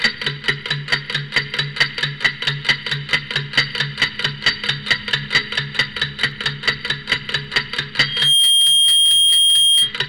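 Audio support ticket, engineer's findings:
Loudspeaker feedback squeal, 8.00 to 9.94 s. Single tone at 3.2 kHz swells in over roughly 0.4 s, then sits around 10 dB above the programme till it drops. Mic is hearing its own speaker, and loop gain tops unity at that frequency.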